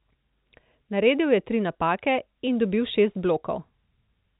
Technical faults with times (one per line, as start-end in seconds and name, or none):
none